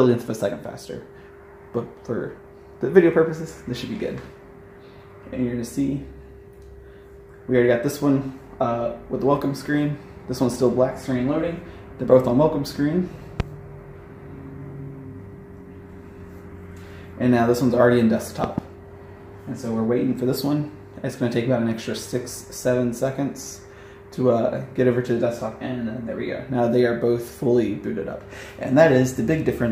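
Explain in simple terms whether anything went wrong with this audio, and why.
A sudden jolt of electrical voltage, likely from a plug, a switch or a static discharge, got added to the signal twice. Each jolt is heard as a loud pop: a single sharp one at 13.40 s, then a quick double pop between 18.44 and 18.60 s, with the sound carrying on underneath.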